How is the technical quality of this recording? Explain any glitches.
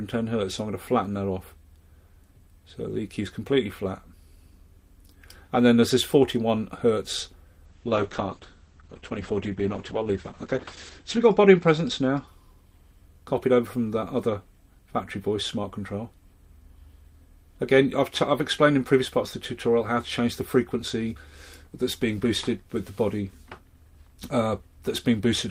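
The recording has one clear glitch. From 7.66 to 12.33 s there is a call bitrate drop: the encoder starved of bits, cutting the top from 20 kHz to 8 kHz, consistent with falling from about 32 to 9 kbps. The sound turns muffled and watery for about 3.5 s.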